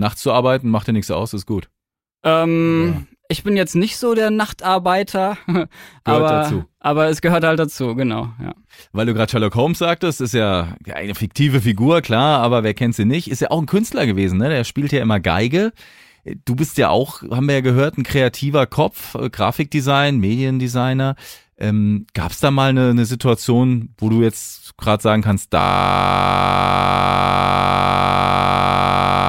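System hang loop from 25.61 s to the end, just after "jetzt gerade sagen kannst": the system froze while the audio hardware kept replaying one 21.33 ms slice of its buffer, which fits a 1024-sample buffer. The exact repetition produces a steady 46.9 Hz buzz that never recovers.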